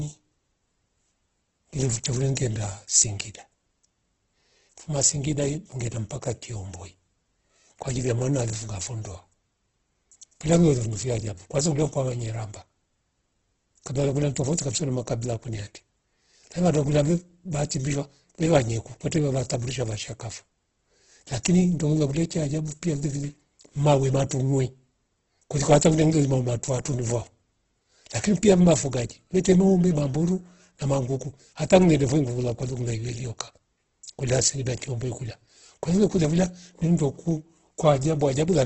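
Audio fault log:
throughout, Opus compression: The speech sounds rough and grainy, with nothing above 8.3 kHz. This likely comes from heavy Opus encoding in its music mode, consistent with about 12 kbps.
2.35 s, 24.29 s and 29.44 s, pre-echo: A brief hiss of 10 to 16 ms precedes each attack, smearing it. The codec spreads quantisation noise across the block before the onset. The second is just after "vilevile mawe", the third just before "noombi mamburu na mangoku".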